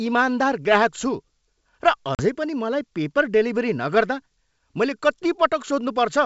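A speech clip carried over G.722 wideband telephone coding. It shows packet loss on an ADPCM call from 2.15 to 2.23 s. About 40 ms of audio, a few packets, drops to hard-edged silence. The decoder's predictor and step size then mismatch the sender's, so the sound resumes slightly distorted before settling.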